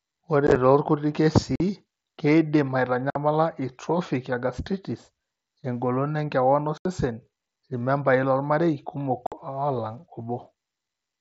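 Short, hard-edged holes break the speech at 0.47 to 0.56 s, 1.56 to 1.60 s, 3.10 to 3.16 s, 6.78 to 6.85 s and 9.27 to 9.32 s. The first is a chopped cluster of gaps, none longer than 15 ms. The largest loss is 75 ms, at 6.78 s. This is unconcealed Bluetooth headset packet loss. Voice packets between headset and phone were lost, and nothing repaired the gaps. The audio stops dead and restarts abruptly, over a light-grain wideband mSBC link.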